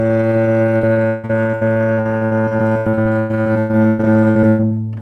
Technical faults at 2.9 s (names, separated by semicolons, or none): repeated packet loss (robotic sound)